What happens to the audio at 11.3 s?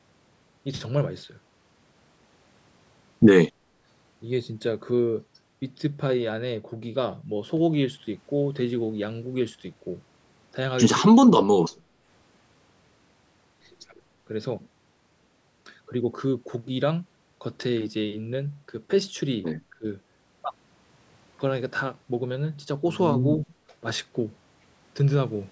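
Speech suppressed in double talk occurs from 11.09 to 11.8 s. The likely cause is an echo canceller handling both sides talking at once: it could not tell this talker's speech from the loudspeaker echo, so it pulled the microphone signal down along with the echo. The speech dips by as much as about 30 dB, with roughly half a second of that span audibly attenuated or cut out in pieces.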